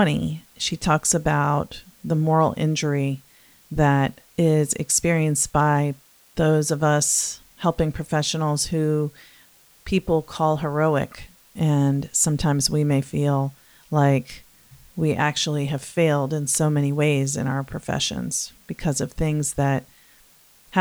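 A constant, even hiss sits under the speech throughout, roughly 35 dB below it, with no distortion. This points to low bit depth with dither, which fits about 9 bits.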